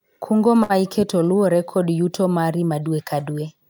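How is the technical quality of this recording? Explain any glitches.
There is one glitch in the speech. A short stall from a late packet occurs at 0.63 to 0.72 s. A packet arrived late and the jitter buffer ran dry. The receiver stretched the last sound for 62 ms, then resumed without loss. You hear one sound held too long, with a faint buzz or dip, and everything after runs 62 ms later.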